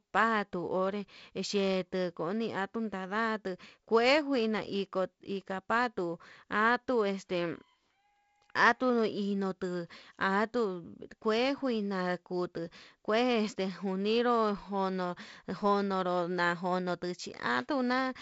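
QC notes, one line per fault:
Nothing stood out on listening to this speech, which comes through the G.722 wideband telephone coding with its upper limit near 7.7 kHz.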